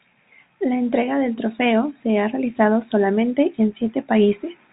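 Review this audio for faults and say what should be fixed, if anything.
Nothing here needs fixing: the speech comes through as ordinary G.711 telephone audio, with the usual telephone-band ceiling around 3.8 kHz.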